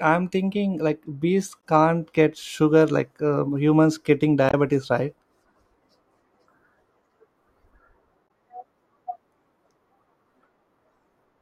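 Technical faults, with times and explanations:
1.60 s, 4.49–4.54 s and 8.25–8.29 s: damaged data in a compressed stream. Bad bytes in the encoded speech make the decoder misread those frames and lose sync while it hunts for the next header, so each spot comes out as a brief chirp or blip.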